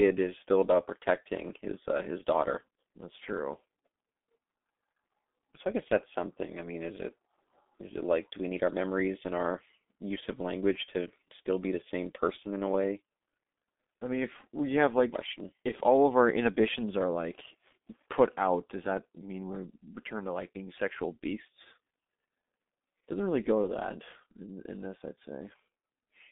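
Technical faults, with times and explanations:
Throughout, G.723.1 codec: the speech sounds muffled, hoarse and boxed-in, with consonants smeared into one another and a heavily processed texture. The sound sits in a narrow telephone band from about 200 Hz to 3.6 kHz, with nothing above 3.8 kHz. The codec squeezes speech into coarse 30 ms frames and refreshes its model of the voice only slowly, so fast detail is lost. The heavy damage fits a stream of roughly 6.3 kbit/s.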